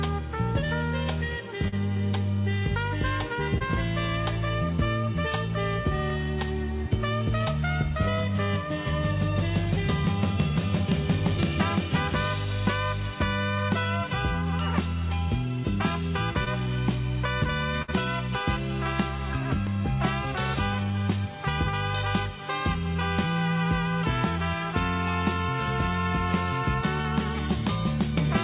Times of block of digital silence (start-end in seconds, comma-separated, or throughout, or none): 6.10, 19.67